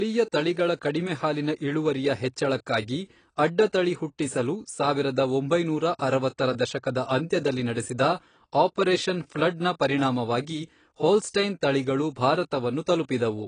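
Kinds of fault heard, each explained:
AAC compression: The speech sounds dull and smeared throughout, with a fizzy, warbling edge on sibilants and nothing above 9.7 kHz. The likely cause is low-bitrate AAC-LC coding, fitting about 24 kbps, where the encoder drops the top band and coarsely quantises the rest.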